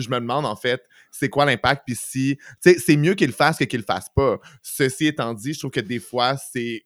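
No technical faults can be heard anywhere in this speech recording. Nothing in it calls for a timestamp or a repair.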